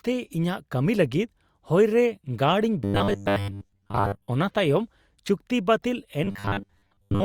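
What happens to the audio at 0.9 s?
At 0.9 s the speech carries on intact, with no dropout, click, distortion or other fault at that moment.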